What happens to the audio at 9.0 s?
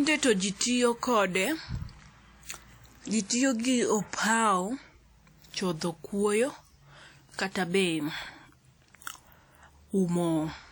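At 9.0 s you're hearing the same WMA compression damage that runs through the whole speech clip: a washy, ringing smear with hiss pumping along with the signal, likely from a long-block transform encode at a bitrate around 48 kbps, with quantisation noise spread over tens of milliseconds.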